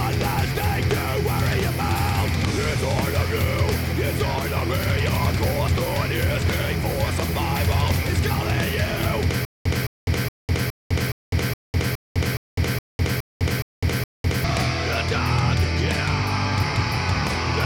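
From 9.45 to 14.44 s there is a stutter with silent gaps. A 214 ms burst repeats twelve times, each followed by about 203 ms of dead silence, every 417 ms. The player likely stalled and replayed its last fragment. The intended audio is lost.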